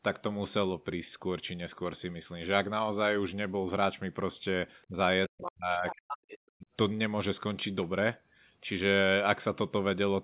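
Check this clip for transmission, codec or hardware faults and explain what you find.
Yes, there are two related echo-canceller faults between about 4.9 and 6.7 s. They sit on a telephone-band signal with nothing above 4 kHz.

Speech suppressed in double talk occurs at 4.88–4.97 s, 5.29–5.99 s and 6.56–6.66 s. With both ends likely talking at once, the canceller treated the talker as echo and turned the level down. The first dip is about 20 dB and the other two about 40 dB, so the speech sinks or cuts out.

Other side's voice leaking through occurs at 5.44–5.51 s and 5.87–6.38 s. The far end's loudspeaker audio was likely not fully removed from the microphone signal. A second voice about 10 dB below the talker breaks in, first as a brief scrap and then as a half-second stretch.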